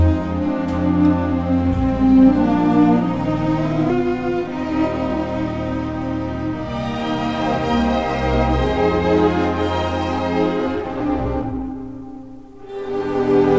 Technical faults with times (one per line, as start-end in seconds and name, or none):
3.90-3.92 skip ahead
10.61-13.00 jitter buffer speed-up